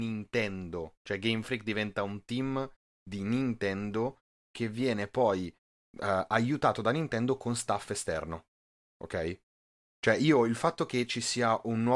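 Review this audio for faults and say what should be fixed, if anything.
Nothing here needs fixing; I went through the whole clip and didn't hear anything that calls for attention.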